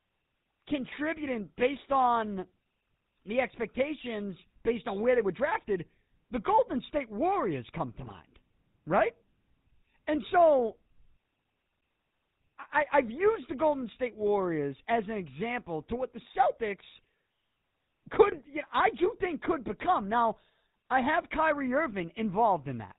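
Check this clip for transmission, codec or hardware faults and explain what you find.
Two things turn up here: the whole clip has been through the GSM full-rate codec, and there are two short bursts of GSM bit errors.

The full-rate codec damage runs throughout and is plainly audible. The sound has the gravelly, buzzy grain of that first GSM coder, which fits its 13 kbps scheme. It models the vocal tract as a filter and drives it with a coarse pulse train built from only every third excitation sample, so fine detail gets replaced by a regular rasp. Nothing comes through above 4 kHz either, which makes it sound dull and boxed-in.

The bit errors land at 8.04 to 8.12 s, right after "come to", and at 18.32 to 18.42 s, just before "you know I do". Each burst lasts roughly 80 to 100 ms, which fits four or five corrupted codec frames and an error rate of around 1.5 to 1.7 percent. Flipped bits hit the decoder's filter, pitch and gain values, so the spectrum twists and the level jumps for those frames, and you hear brief squawky, gargling pops.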